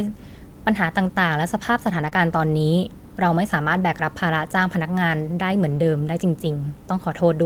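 Lost packet rebuilt from error correction, 1.93 to 2.07 s: about 80 ms of speech never arrived, which fits four separate 20 ms packets. Each following packet carried a low-bitrate backup copy of the one before it, and the decoder played those copies instead of leaving silence. The stretch stays continuous but turns coarser and grainier. The same fault recurs at 5.67 to 5.77 s, about 60 ms rebuilt this way, pointing to three packets.

Short concealed packet loss at 2.09 to 2.13 s: right after the first rebuilt stretch, another 20 ms went missing, this time with no backup copy. The receiver extended the preceding sound for about 17 ms to bridge the hole, then crossfaded back into the real signal, leaving a brief smeared patch.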